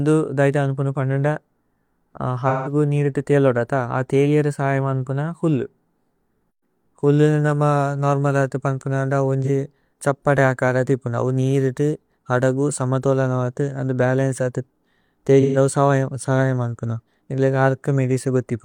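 AAC frame loss with concealment hits at 2.48–2.72 s before "നീരിത ഥേഅല്ലോദത അ ഥേഅല്ലേര", 9.44 s after "ന്ദ അവോ", and 15.41–15.57 s: smeared, phasey patches where the decoder reused the last good spectrum.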